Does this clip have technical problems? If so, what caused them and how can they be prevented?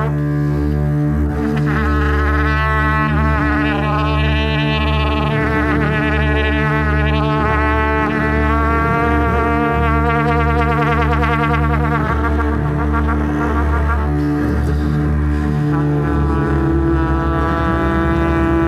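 No, this clip has no technical problems, so there is nothing to prevent.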